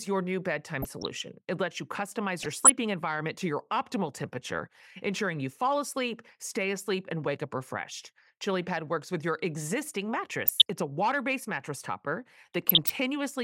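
Short bursts of burbling break over the speech at 0.82 to 1.12 s after "your new bedtime", at 2.38 to 2.70 s between "lets you" and "environment to your optimal", at 10.46 to 10.70 s, and at 12.53 to 12.90 s after "water based mattress topper". This is DAB burbling. Weak reception let a fraction of a percent of bit errors slip past the error correction, corrupting samples so single sub-bands picked up short blips of noise.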